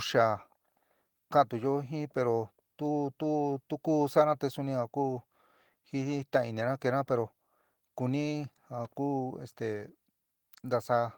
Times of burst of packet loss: none

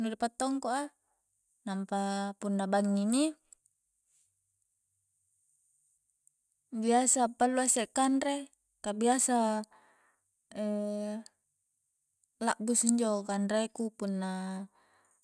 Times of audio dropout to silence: none

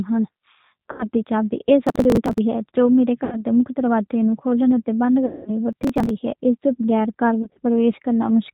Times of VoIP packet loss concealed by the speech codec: 0.92-1.05, 3.24-3.45, 5.26-5.51, 7.42-7.59

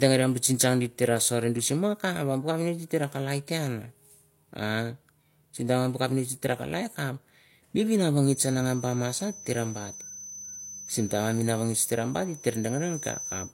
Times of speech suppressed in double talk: none

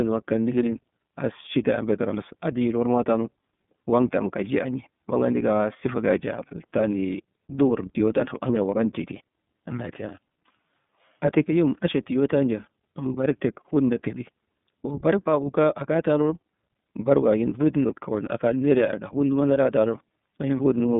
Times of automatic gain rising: none

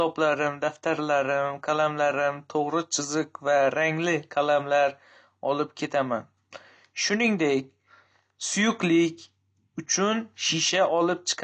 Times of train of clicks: none

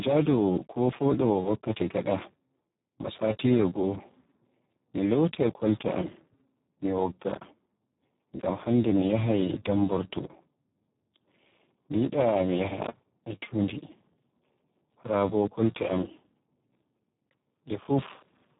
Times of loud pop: none

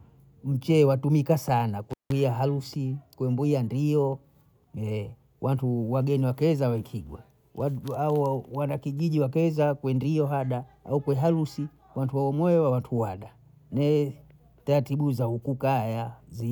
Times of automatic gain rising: none

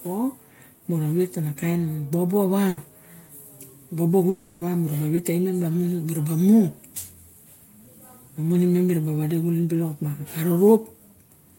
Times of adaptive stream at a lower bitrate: none

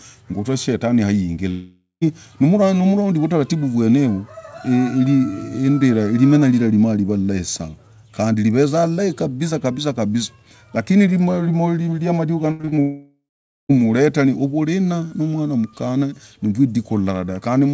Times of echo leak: none

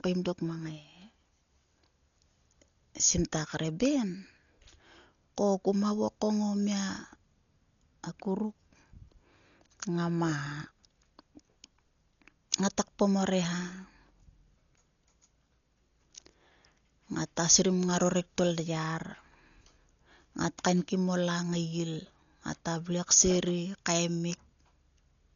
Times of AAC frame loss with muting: none

